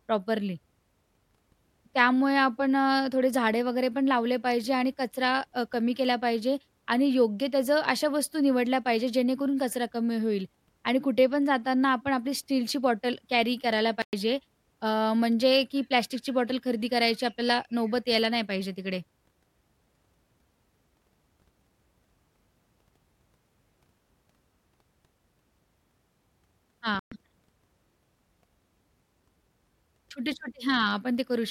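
A likely Bluetooth stall, with delayed packets draining the headphones' buffer, briefly halts playback twice. The speech drops to silence for about 110 ms at 14.02 to 14.13 s and about 120 ms at 26.99 to 27.12 s, then resumes abruptly.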